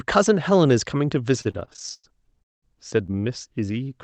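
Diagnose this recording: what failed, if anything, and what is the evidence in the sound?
Network and jitter buffer: packets kept arriving late, producing repeated stalls (stutter) from 1.41 to 2.64 s. Seventeen gaps were filled by stretching and fading the last sound, the longest 200 ms, so the speech drags.

Network and jitter buffer: one late packet caused a short stall from 3.12 to 3.25 s. The receiver held the previous sound for about 21 ms, giving a brief drawn-out moment.

Jitter buffer: a slow-down from 3.65 to 3.85 s repeated pitch periods to rebuild its reserve. The speech plays at 83% speed, stretched by 43 ms at unchanged pitch.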